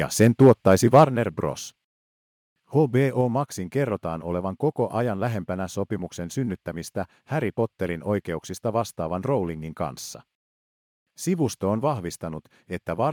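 From 0.21 to 1.04 s the loudest syllables carry a harsh, crackling edge: microphone overload, likely from an input level set too high for the converter, so peaks that wanted to go about 3 dB further were sheared off at the converter's limit. On the waveform, a small share of samples, a couple in every hundred, sit flattened at the clipping level. In a spectrogram those flattened tops show as broadband smears above the harmonics at each loud syllable.

At 1.05 s the level abruptly falls by about 7 dB, with speech and background dropping together, right after the distorted stretch. This is the microphone volume stepped down, likely by the call software reacting to that overload. A second, smaller step of about 2 dB follows at 3.21 s. Each appears on the waveform as an instant shrink of the envelope, and on a spectrogram as a sudden darkening across all frequencies at once, with no ramp.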